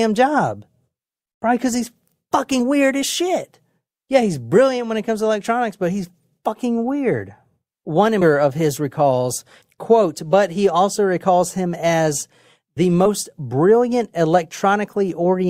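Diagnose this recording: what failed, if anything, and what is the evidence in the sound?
The codec stage failed: compressed frames were skipped at 2.59 s (just before "weird as shit"), 6.41 s, 8.21–8.24 s (just before "of his recalls quote") and 13.05–13.08 s (after "recalls him as the"). The speech jumps forward by roughly 100 ms, 20 ms, 400 ms and 70 ms, all consistent with whole 20 ms frames going undecoded. On a spectrogram, harmonic tracks break and resume mid-contour at each join.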